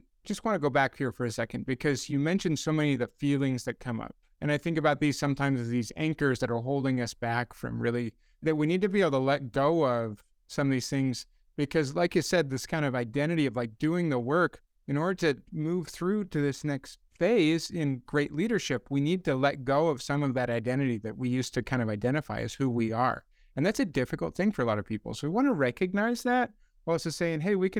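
No technical faults can be heard anywhere in this speech recording. Nothing in it points to a problem with how the audio was captured, processed or delivered.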